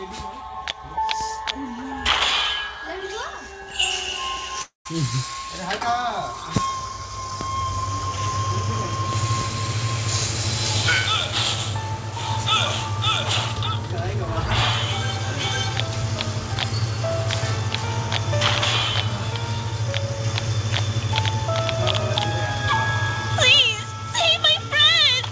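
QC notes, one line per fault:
4.62–4.87 s, long network dropout: the sound smears into a fading buzz, falls silent for about 140 ms, then resumes later with roughly 240 ms missing. This is likely a stalled stream. Unlike a brief packet-loss click, the concealment decays into silence.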